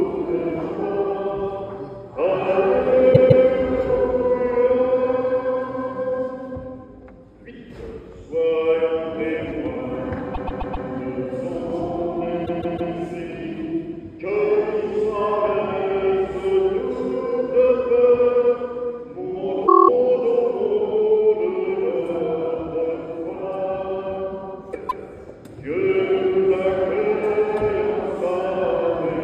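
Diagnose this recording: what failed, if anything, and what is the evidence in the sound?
Repeated frames in the compressed stream, at the codec or storage stage. The sound stutters at 3.12–3.44 s (a 157 ms block replayed twice), 10.33–10.86 s (131 ms, four times), 12.45–12.92 s (157 ms, three times), 19.66–19.89 s (a single 26 ms slice, eight times) and 24.88–25.04 s (157 ms, once). The block lengths fit frames of about 26 ms being written again. A spectrogram shows identical vertical slices tiled side by side.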